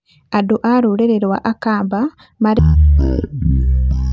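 At 2.59 s the speech abruptly drops into a slow, deep drawl that lasts to the end of the clip at 4.13 s. This is a wrong sample rate fault: the audio runs at one third of its proper speed and sits about 19 semitones lower, which fits 48 kHz material played back at 16 kHz without conversion. Unlike a pitch shift or time-stretch, speed and pitch fall together by the same ratio.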